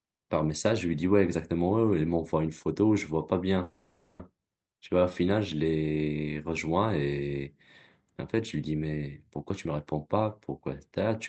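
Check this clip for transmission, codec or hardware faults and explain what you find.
Two kinds of fault are present: one call audio freeze and two jitter buffer speed-ups. The audio passed through a call codec, which band-limits it to about 8 kHz.

From 3.63 to 4.21 s the sound stalls. The last sound is drawn out as a buzzy tone that fades away. The likely cause is a call audio freeze: packets were held up and the jitter buffer ran dry. The receiver filled roughly 560 ms by extending what it had. When packets resumed, the audio picked up exactly where it stopped. Nothing was lost. Everything after simply arrives about 560 ms later.

Two jitter buffer speed-ups follow. The first runs from 9.50 to 10.28 s at about 119% speed. The second runs from 10.92 to 11.12 s at about 126%. After the delay built up, the receiver cut short pitch-period slices again and again to catch up. Around 150 ms went in the first stretch and around 70 ms in the second. 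The pitch stays put, but the audio sounds hurried.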